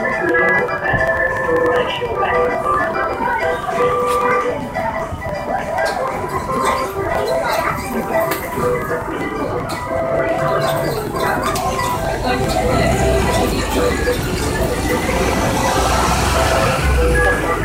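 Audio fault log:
0.10–17.54 s, periodic USB or driver dropouts: something blocks the USB bus or audio driver every 0.098 s, and each time roughly 2 ms of audio is skipped outright, giving around two hundred evenly spaced ticks, about ten per second, heard wherever sound is present.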